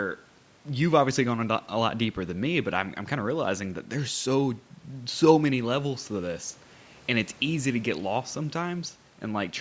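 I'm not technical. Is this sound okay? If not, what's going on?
Yes, nothing stood out on listening to this recording, and the thin low end simply comes from the normal microphone processing of a call, which trims the deepest bass.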